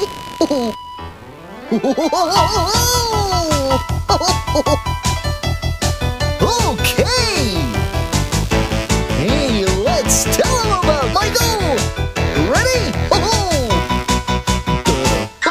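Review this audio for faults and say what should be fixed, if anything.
Computer activity noise runs throughout: a buzzy pulsing at around 70 Hz, roughly 20 dB below the signal, tracking processor or mouse load through the shared audio ground. Prevent it with an isolated external interface or a ground-loop isolator.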